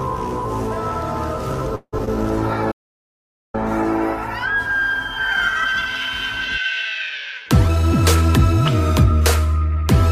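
At 1.75 s the audio stalls until 1.95 s in what sounds like a call audio freeze: packets likely arrived late and the jitter buffer ran dry. About 171 ms is inserted, with the last sound extended as a decaying buzz that ends in about 60 ms of silence. Playback then resumes where it stopped, so nothing is lost, but the delay grows by the same 171 ms.

Two short concealed packet losses follow at 1.99 s and 2.05 s, each about 30 ms long. Roughly 20 ms and then 40 ms of audio never reached the decoder. The receiver bridged each hole by continuing the preceding sound and blending back, which leaves a brief smear or wobble. The second event also pulls the delay back by roughly 30 ms.

From 2.34 s to 6.97 s a call bitrate drop takes the encoder from 64 to 16 kbps, holding at the lowest rate for 1.28 s. With so few bits the coding turns coarse and the highs are trimmed, giving a rough, muffled, watery quality.

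Inside that stretch, an audio dropout to silence runs from 2.72 s to 3.54 s. About 0.82 s is replaced by silence with no room tone, likely from a lost input or a mute. Whatever occurred in that span is gone.

From 7.68 s to 8.54 s a jitter buffer speed-up plays the audio at about 112% speed at unchanged pitch. Roughly 100 ms of surplus buffered audio is trimmed in small pitch-period slices, so this section sounds hurried.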